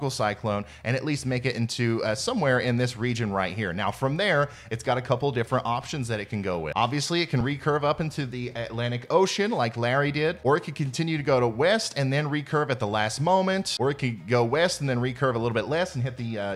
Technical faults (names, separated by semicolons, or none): dropped buffer (overrun)